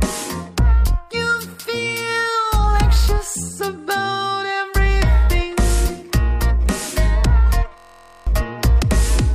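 From 7.78 to 8.27 s there's a system hang loop: a 23.2 ms slice repeats as a 43 Hz buzz, which fits a 1024-sample buffer, losing about half a second.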